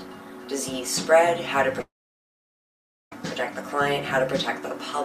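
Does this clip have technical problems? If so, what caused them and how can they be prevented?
Yes, two related problems. At 1.79 s there's a short concealed packet loss: about 10 ms of audio never arrived in time, and the receiver papered over it by extending the last bit of sound, so you get a tiny smear right there.

Right after, from 1.81 s to 3.12 s, the sound briefly continues, then drops to silence for about 1.2 s before returning with that stretch simply gone. That's most likely a long network dropout, with the concealment fading out once no packets showed up. A steadier connection, such as wired rather than Wi-Fi, and a larger jitter buffer would help prevent both.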